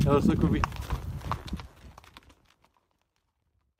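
A skip ahead around 0.59 to 0.61 s: roughly 0.4 s of audio was dropped with nothing filled in, so playback jumps straight forward and the two sides butt together. The smooth fade-out from about 1.5 s is unrelated.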